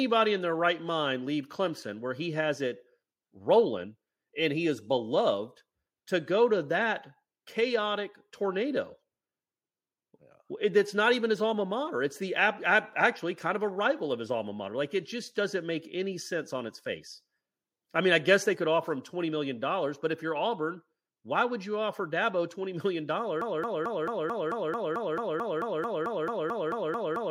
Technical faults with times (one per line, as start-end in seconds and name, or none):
23.41-27.31 broken-record loop